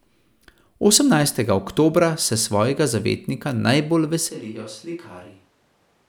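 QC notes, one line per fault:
4.31 s to end, switch to a distant microphone: the speech abruptly turns roomy and hollow with thinner bass, falls by about 10 dB, and room noise comes up to around 30 dB below the speech, likely because the close microphone dropped out and a farther pickup took over.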